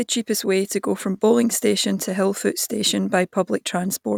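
No technical faults can be heard anywhere in this speech recording. Nothing in the signal chain draws attention to itself at any moment.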